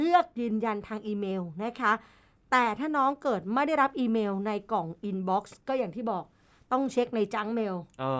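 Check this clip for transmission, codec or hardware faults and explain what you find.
No fault can be heard anywhere in the recording. The speech runs on without interruption or any sudden change in its sound.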